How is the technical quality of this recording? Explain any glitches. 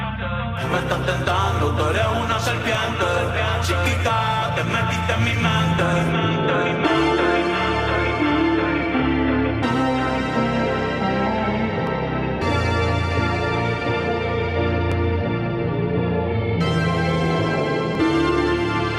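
Clock drift buffer slips are heard as a regular click or pop roughly every 3.04 s from 2.75 s to 17.95 s, about seven in all. These likely come from two devices running on mismatched clocks, roughly 400 ppm apart, so the buffer between them drifts until a block of around 70 samples is dropped or repeated.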